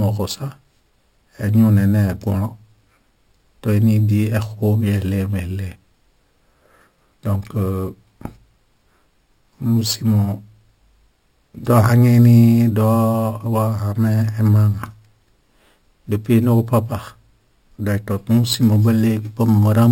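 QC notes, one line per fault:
Throughout, imaging from sample-and-hold upsampling: each sample was simply repeated with no smoothing, so a mirrored copy of the speech fills 6 to 12 kHz at about 24 dB down. It's a metallic fizz that tracks loudness and moves against pitch, consistent with a 12 kHz original rate.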